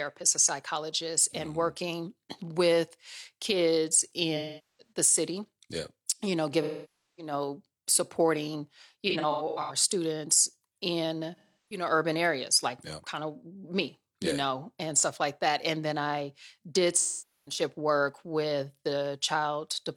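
AAC frame loss with concealment hits the speech at 4.36–4.92 s, 6.62–7.33 s, 9.10–9.76 s, 11.36–11.85 s and 16.97–17.61 s. Each time, compressed frames went missing and the decoder filled the hole by reusing the last good spectrum. The third stretch is different: brief dropouts scattered across the span, none longer than about a tenth of a second, each a short smeared, noisy or phasey patch.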